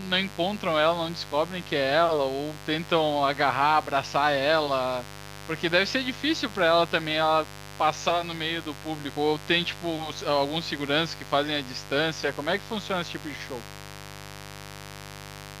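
Mains buzz runs throughout: switching spikes on the 50 Hz supply leak in, stacking harmonics into the kilohertz range, a raspy buzz roughly 15 dB below the speech.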